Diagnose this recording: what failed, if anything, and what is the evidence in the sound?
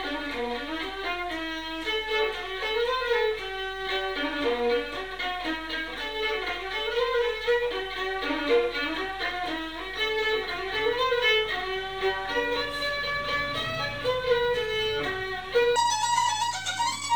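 Section at the wrong speed, from 15.76 s to the end at 17.16 s. Over that final stretch the audio runs at 1.98 times its proper rate, so timing compresses and pitch rises together, by roughly ten semitones, leaving the sound high and hurried. Because speed and pitch shift as one, the likely cause is a playback or editing stage reading those samples against the wrong clock, rather than any pitch processing.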